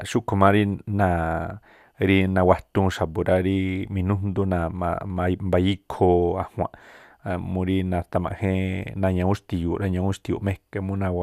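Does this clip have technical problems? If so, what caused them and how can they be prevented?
No, there are no technical problems to fix here.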